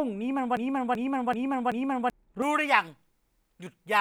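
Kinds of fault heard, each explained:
Broken-record loop: from 0.57 to 2.10 s, a 0.38 s fragment of speech repeats four times back to back, likely a stalled player or stream resending its last buffer.
Pre-emphasis left on: from 2.42 s to the end, treble sits about 11 dB high at 10 kHz, making the speech thin and sibilant, which fits an uncorrected J.17 boost.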